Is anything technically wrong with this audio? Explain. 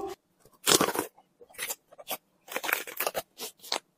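No, nothing technically wrong is audible in this audio.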